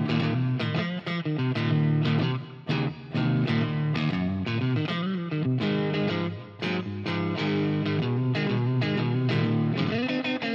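No technical faults are audible.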